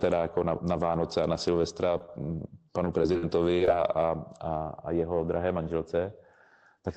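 At 1.98 to 2.01 s and again at 2.06 to 2.09 s there is short concealed packet loss: a few tens of milliseconds of speech arrived too late, and the receiver extrapolated the preceding sound and crossfaded back, leaving two brief smears.

From 2.85 to 3.68 s, repeated packet loss produces robotic sound. Seven separate gaps, the longest about 47 ms, are each patched by continuing the last sound. Roughly a sixth of the stretch is synthetic, heard as choppy speech. The Opus call path's upper limit near 8 kHz applies throughout.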